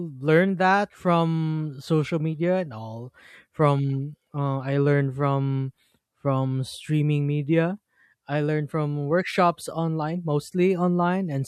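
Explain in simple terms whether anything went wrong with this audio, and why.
Nothing went wrong with this audio; the speech comes through without any fault to point to.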